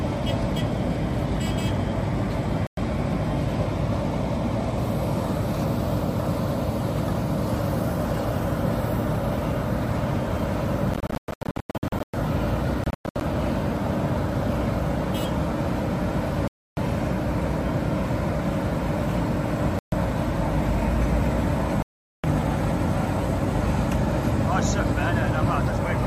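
Six silent holes, likely a Bluetooth dropout where packets missed the headphones: 2.67, 10.94–12.14 (scattered), 12.84–13.21, 16.48–16.77, 19.79–19.93 and 21.82–22.24 s, each resuming as if playback had continued.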